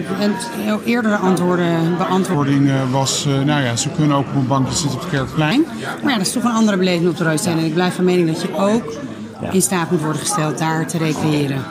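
From 2.34 to 5.51 s a section at the wrong speed plays at 0.805 times its proper rate, likely from being clocked wrongly, so the sound drops about four semitones and drags. On a spectrogram, harmonics step down and events stretch wider in time.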